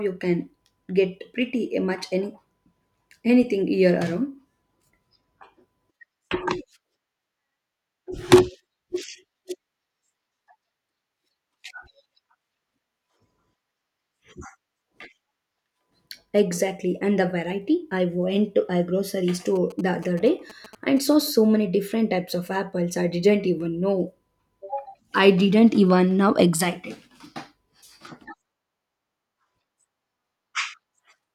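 From 19.56 to 21.22 s, after "went to a grocery" and before "many different types of", GSM signalling bursts appear. A galloping dit-dit-dit of brief 217 Hz buzzes sits roughly 20 dB under the speech as the audio circuit rectifies a nearby 2G phone's radio bursts.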